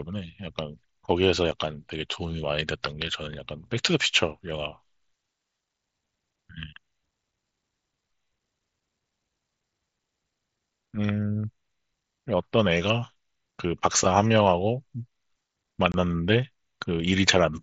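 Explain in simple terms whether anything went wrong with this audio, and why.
Two abrupt silent gaps in the speech, at 1.51 s and from 15.92 to 15.94 s, are unconcealed Bluetooth headset packet loss: lost voice packets were replaced with silence.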